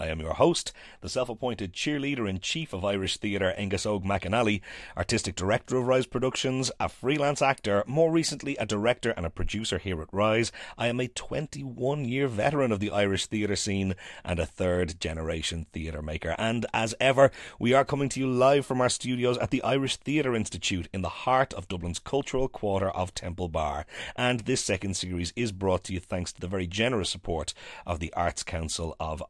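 No technical faults can be heard anywhere in the speech recording, and the signal stays continuous and intact throughout.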